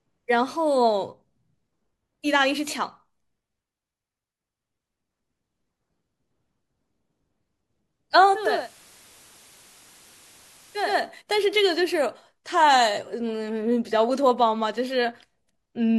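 At 8.23 s hiss rises and the speech drops by about 4 dB over roughly half a second, staying that way until 11.14 s, with hiss around 20 dB down. This is digital radio blending to analogue: the receiver lost the digital stream and cross-faded to the station's FM broadcast, then back.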